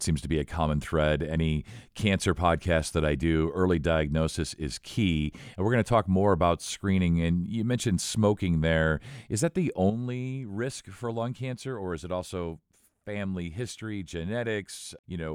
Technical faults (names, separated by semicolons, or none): sudden gain jump